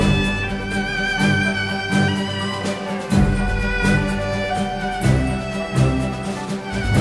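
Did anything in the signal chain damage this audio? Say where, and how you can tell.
No, nothing in the chain stood out as damaging this audio when I listened to it.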